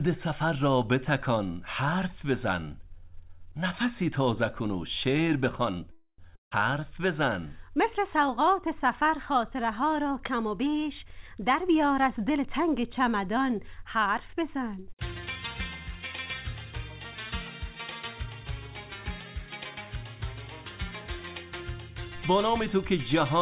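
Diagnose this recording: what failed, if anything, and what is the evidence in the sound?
Network stage, call audio freeze at 5.92–6.32 s: the last sound stretches into a fading buzz, then brief silence, likely from delayed packets draining the jitter buffer.

Network stage, long network dropout at 6.36–6.53 s: a short fading fill, then silence, and the audio resumes with about 160 ms likely lost in transit.

Jitter buffer speed-up from 11.05 to 14.43 s: the sound runs about 8% fast at unchanged pitch, as the buffer trims pitch-period slices, roughly 0.3 s in total.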